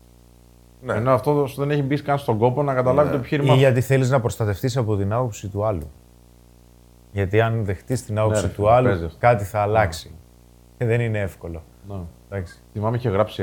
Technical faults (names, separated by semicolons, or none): video or display buzz